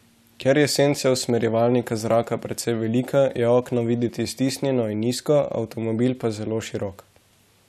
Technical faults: none

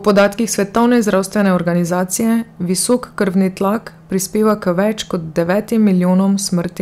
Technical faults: hard clipping

